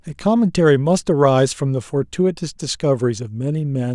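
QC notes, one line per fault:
No faults found in this clip.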